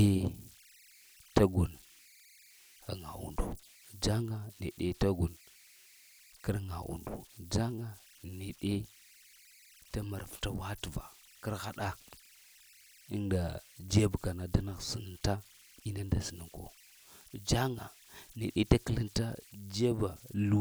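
Throughout the speech there are converter idle tones. A whistle sits around 2 kHz, about 28 dB below the signal. It is clearest in the pauses between phrases. Under the quieter passages it turns into a grainy hiss. The cause is a delta-sigma converter running without dither. With almost no input, its modulator settles into repeating bit patterns. Those patterns produce steady tones, and their pitch is set by the small offset at the input.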